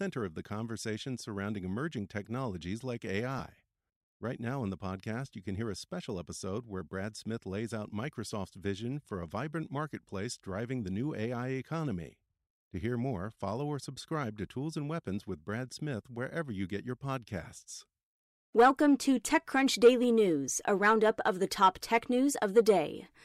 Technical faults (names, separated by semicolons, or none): lost LE Audio frames